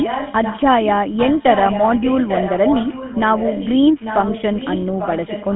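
From start to finish the speech has a buzzy, gravelly roughness, and the top end is missing, with nothing above about 3.8 kHz and the band sitting roughly between 150 Hz and 3.4 kHz. This is the GSM full-rate codec at work. It rebuilds the voice from a vocal-tract model excited by sparse, regularly spaced pulses, which produces that grainy buzz and fits the codec's 13 kbps rate.

From 0 to 0.63 s, and again from 3.99 s to the end, a fainter second copy of the speech trails the main voice by about 0.84 s, around 10 dB below it. This is echo leak. Its likely cause is a far end on loudspeaker whose echo canceller failed to remove what its microphone picked up, so part of the call was sent back down the line.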